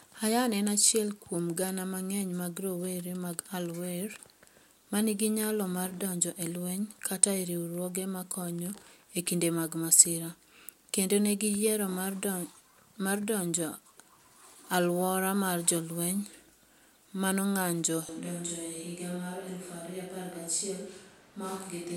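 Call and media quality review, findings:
18.09 s onward: abrupt roomy, hollow, bass-light speech, about 5 dB quieter, louder background; likely switch to a distant microphone after close-mic loss. Waveform steps down; spectrogram shows weaker lows, raised noise floor.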